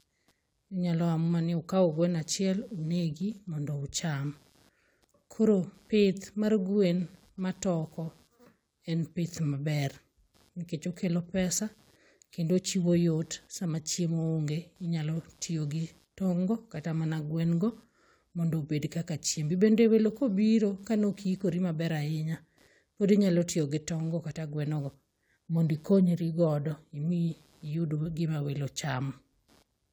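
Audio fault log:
throughout: computer activity noise. Changing load from the processor, graphics card or mouse is disturbing the ground that the audio circuit shares with the computer, and that disturbance rides into the recording as an electrical buzz. Under the speech it comes through as a faint rasping hum, pulsing at roughly 150 Hz and sitting about 40 dB below the voice. It rises and fades with the machine's activity rather than with the speech.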